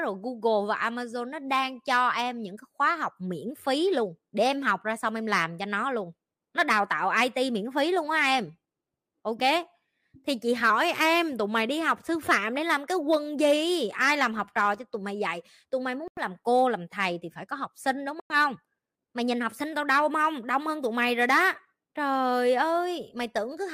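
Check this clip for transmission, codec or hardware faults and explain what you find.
Two kinds of fault appear in the speech: two brief playback-rate jumps and two short silent gaps.

From 10.70 to 11.70 s the speech slows by 6% and drops about 107 cents, then snaps back. At 19.15 to 19.73 s it speeds up 6% and rises about 101 cents. Both are likely a drift correction step, where clock-matching software abruptly retunes the rate to rebalance its buffer. Unlike wow, the shift is flat and stepped, not wavering.

At 16.08 to 16.20 s (92 ms of silence) and 18.20 to 18.33 s (101 ms) the sound drops to clean silence and resumes. This is likely a Bluetooth stall, where delayed packets let the headphone buffer run empty. Unlike a codec dropout, there is no smeared or concealed filler, only a hard gap.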